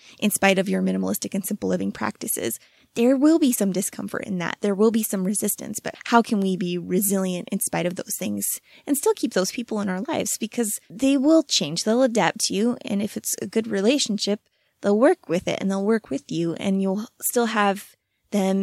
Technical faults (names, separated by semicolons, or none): none